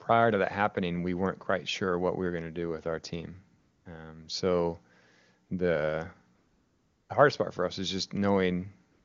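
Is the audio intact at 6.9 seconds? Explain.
No. At 6.9 seconds the real background is gone, replaced by a smooth, steady hiss that switches in at 6.35 s and out at 7.09 s. This is AMR comfort noise: for those 740 ms the phone judged the talker silent and stopped sending speech frames, so the receiving end synthesised filler noise from a rough description of the background's level and spectral shape rather than reproducing the actual sound.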